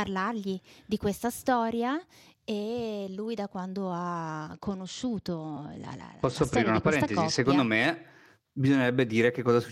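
It's a speech clip, and from 4.52 to 7.46 s there's a Bluetooth SBC bit pool drop: treble goes dull and gritty, consistent with falling from 31 to 11, about 83 kbps.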